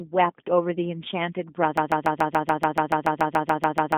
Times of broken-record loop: 1.77-3.97

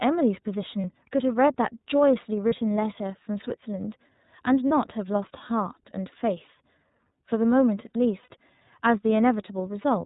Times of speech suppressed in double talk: none

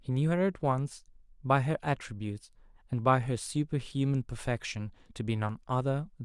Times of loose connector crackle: none

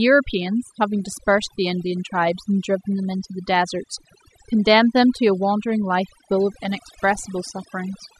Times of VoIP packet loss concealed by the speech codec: none

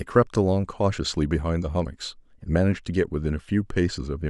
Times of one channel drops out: none

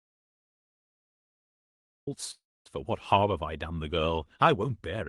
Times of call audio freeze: 2.31-2.68

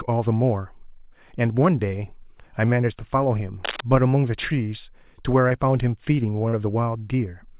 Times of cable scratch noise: 3.64-3.81

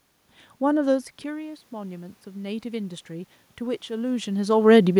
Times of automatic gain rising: 0.87-4.47

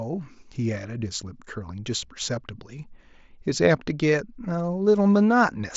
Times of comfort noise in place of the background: none

